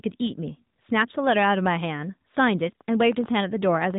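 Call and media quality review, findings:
Muffled, buzzy, somewhat synthetic speech for the whole clip, nothing above 4 kHz. AMR narrowband mobile codec: 8 kHz sampling, vocal-tract model driven by sparse pulses per 20 ms frame. Damage level suggests a mid-rate mode, around 10 kbps.

Irregular ticking over the speech, 2.39 to 3.95 s, about 11 clicks per second, some twenty in all, peaks roughly level with the speech. Train of clicks: repeated near-identical pulses, likely from electrical interference or a faulty connection or power supply.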